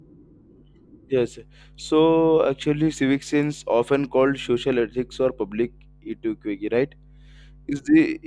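A speech recording with no technical faults to report. Nothing in it needs an explanation of time, cause or mechanism.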